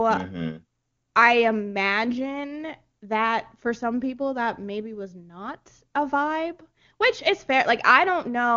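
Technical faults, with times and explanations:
Nothing here counts as a technical fault; the speech comes across as it would through an HD Voice call at one of AMR wideband's higher rates, with just the usual wideband ceiling on the top end.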